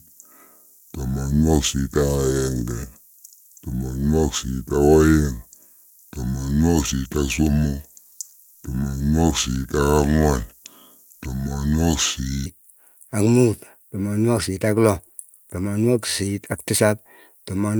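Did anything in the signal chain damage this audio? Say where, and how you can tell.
Yes. From 0.0 to 12.46 s the speech drags and sounds deep, running at 0.691 times normal speed and about seven semitones low, then returns to normal. This section at the wrong speed likely comes from playback or editing against a mismatched clock rate.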